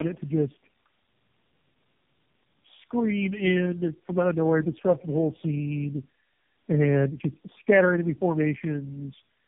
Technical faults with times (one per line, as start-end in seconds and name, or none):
0.00-9.47 tandem speech coding